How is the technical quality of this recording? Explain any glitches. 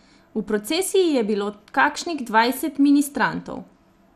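The technical quality is limited: the speech sounds dull and granular the whole way through, and there is one short burst of burbling near the start.

MP2 compression, throughout: the top end is missing and what remains has a gurgling, grainy edge. This is likely MPEG Layer II coding at a low rate, and the damage fits something around 80 kbps. With too few bits, whole upper sub-bands are switched off and the surviving bands are quantised roughly. On a spectrogram that shows as a hard ceiling with patchy, flickering blocks beneath it.

DAB burbling, 1.06 to 1.13 s: a few watery blips sit over the speech. Bit errors have slipped past error correction into the coded audio, and the rate is a small fraction of a percent. Corrupted samples put short noise blips into single sub-bands, and corrupted scale factors make sub-bands jump in level for up to a frame, and this span fits about three frames. 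A spectrogram would show isolated bright rectangular band blocks lasting only a few tens of milliseconds. The waveform would show a short irregular lump over the speech envelope.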